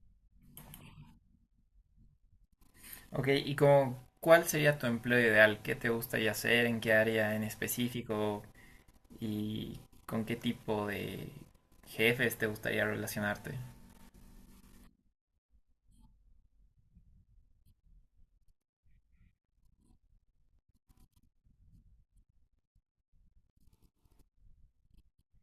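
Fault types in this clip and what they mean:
No technical faults are audible anywhere in this recording.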